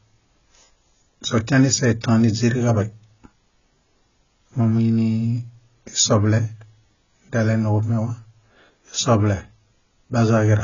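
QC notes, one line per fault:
Throughout, AAC compression: nothing survives above 7 kHz, so the speech sounds dull and muffled, with a swirling, fizzy texture on sibilants and held vowels. The likely cause is heavy AAC-LC coding at a very low bitrate, around 16 kbps, where the encoder lowers its cut-off and quantises each frame's spectrum coarsely. On a spectrogram there is a hard ceiling at 7 kHz and patchy, blocky holes below it that flicker from frame to frame.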